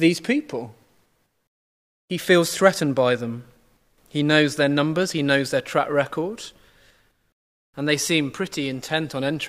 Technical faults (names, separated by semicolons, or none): dropped samples